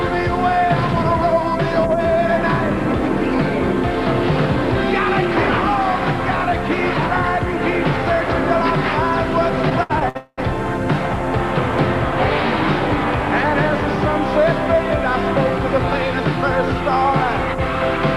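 From 9.69 to 10.17 s there's a run of repeated stalls, a stutter: four short hitches where packets came in late, so the receiver kept stretching the last bit of sound. Nothing's lost, but about a third of that stretch is filler, the longest hold around 68 ms.

Straight after, from 10.17 to 10.40 s, it turns into a proper call audio freeze. That's likely a packet delay draining the jitter buffer. You hear about 205 ms of held-over sound fading down, the last 50 ms or so silent, then the audio picks up where it left off.

At 15.93 to 15.95 s there's a single loud pop, roughly 10 dB above the surrounding level, sitting on top while the sound keeps going underneath. A plug, switch or static discharge is the likely culprit, throwing a quick voltage spike into the signal.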